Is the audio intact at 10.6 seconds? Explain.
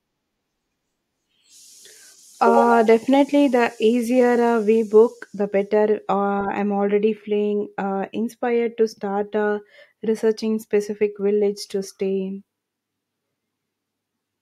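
Yes, the audio is intact at 10.6 seconds, with no audible fault at that moment.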